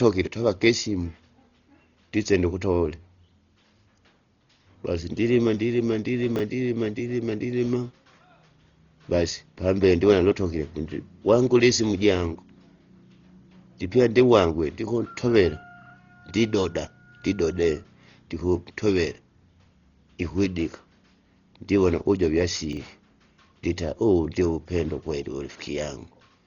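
Throughout the speech the sound is dull and muffled, with nothing above about 6.9 kHz and a rough, fluttering noise clinging to voiced tones. This is likely heavy Dolby Digital compression at a very low bitrate, fitting about 32 kbps, where the encoder narrows the band and fills unfunded lines with dither noise.

From 6.36 to 6.40 s, and again from 22.73 to 22.77 s, a brief jumbled stutter cuts into the audio. These are chunks out of order: a 10 ms chunk plays three chunks late, so the order scrambles, leaving three hard joins.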